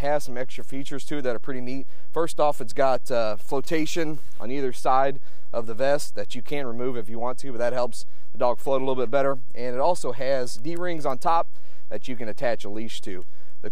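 A DC offset runs through the whole clip: a constant shift moves the waveform off its zero line. It is not audible as a sound, but it eats into available headroom and appears as steady energy at the extreme low end of the spectrum.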